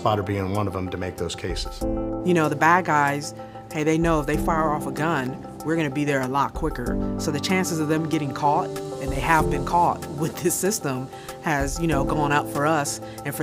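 At 5.21 to 5.27 s, loose connector crackle: an intermittent contact briefly chops the signal, producing a short, irregular scratchy burst over the sound.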